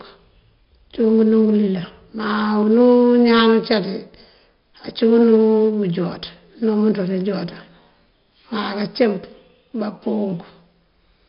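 A speech clip with 4-bit ADPCM compression throughout. Each sample is coded as a coarse step from a prediction, so the error rides along with the level. Louder passages carry a gritty hiss, and sharp onsets distort where the step size lags behind. The damage is heavy. Nothing is present above about 5.3 kHz, which leaves the sound dull and fits a low sample rate near 11 kHz and a rate around 44 kbps.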